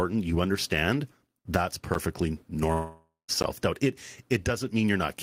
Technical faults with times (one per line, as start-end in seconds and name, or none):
1.94 block of digital silence
2.72-3.30 long network dropout
3.42 block of digital silence